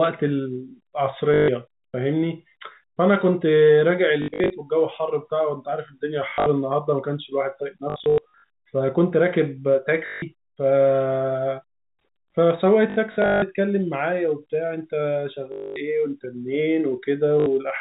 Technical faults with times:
1.34-1.48 packet loss with last packet repeated
4.22-4.50 packet loss with last packet repeated
6.30-6.46 packet loss with last packet repeated
7.90-8.49 packet loss with last packet repeated
10.06-10.22 packet loss with last packet repeated
12.90-13.42 packet loss with last packet repeated
15.52-15.76 packet loss with last packet repeated
17.40-17.46 packet loss with last packet repeated

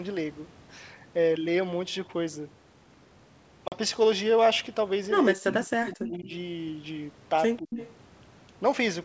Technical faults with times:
3.68-3.75 packet loss on an ADPCM call
5.33-6.32 speech suppressed in double talk
7.58-7.78 speech suppressed in double talk
7.77-7.87 echo leak

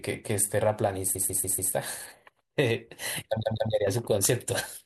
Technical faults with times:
1.14-1.72 repeated frames
3.42-3.71 repeated frames

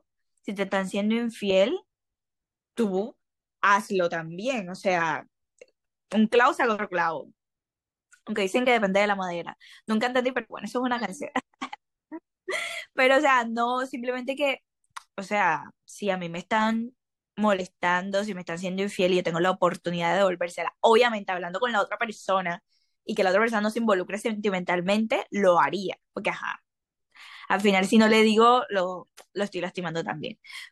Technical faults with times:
none

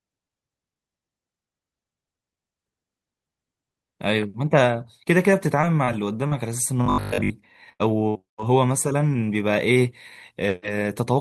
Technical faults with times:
5.61-8.38 repeated packet loss (robotic sound)
6.86-7.36 robotic sound from repeated short buffers

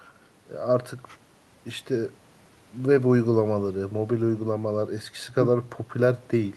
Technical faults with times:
none

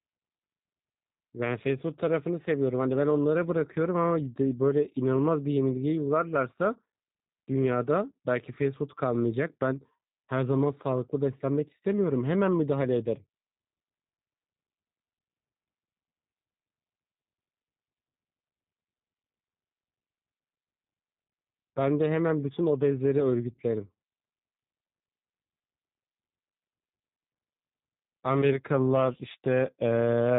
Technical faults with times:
0.00-30.38 G.729 codec

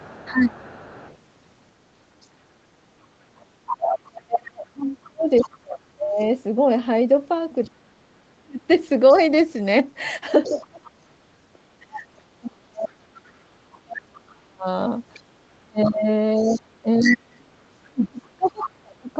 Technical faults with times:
0.00-12.21 other side's voice leaking through
0.31-0.63 speech suppressed in double talk
3.76-8.61 speech suppressed in double talk
10.49-19.10 speech suppressed in double talk
14.30-18.66 other side's voice leaking through

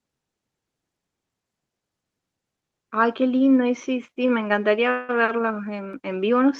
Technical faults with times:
4.26-4.30 short stall from a late packet
4.91-5.11 call audio freeze
5.93 block of digital silence

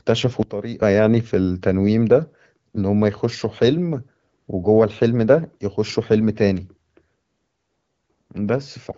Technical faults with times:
0.43-0.82 sudden gain jump

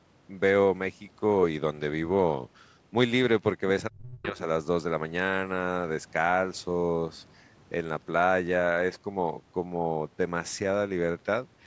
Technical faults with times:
3.89-4.41 speech suppressed in double talk

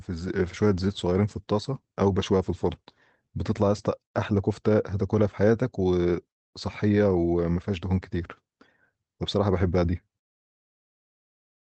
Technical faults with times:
none

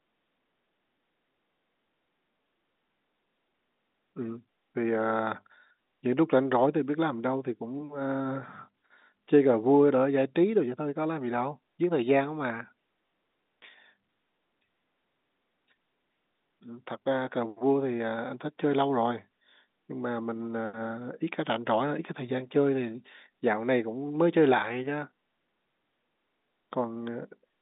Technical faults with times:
none

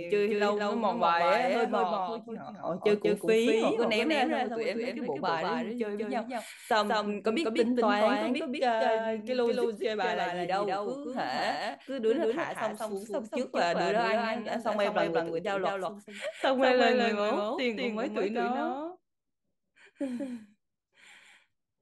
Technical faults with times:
0.00-21.81 doubled audio track

